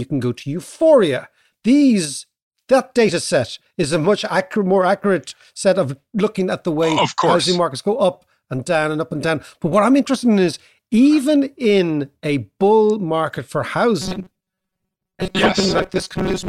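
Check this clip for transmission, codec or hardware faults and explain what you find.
One fault appears, confined to the last couple of seconds of this speech clip.

From 14.02 s to the end at 16.48 s there is robotic sound from repeated short buffers. The likely cause is audio arriving too seldom, so playback repeats a short slice, about 5.3 ms, in place of missing material, with roughly half the signal being repeats. That fixed repetition imposes a metallic buzz at 188 Hz that only loosely tracks the speech. A spectrogram shows rigid, evenly spaced horizontal harmonics at multiples of 188 Hz, and the waveform shows identical short cycles repeating back to back.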